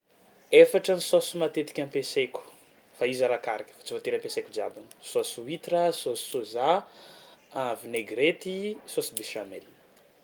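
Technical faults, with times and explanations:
No technical faults detected in this speech recording.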